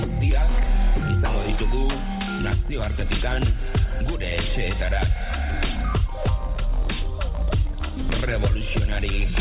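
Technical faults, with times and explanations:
No technical faults found; the sound comes over a narrowband call path with nothing above 4 kHz, which fits G.711 A-law telephone coding at 64 kbps.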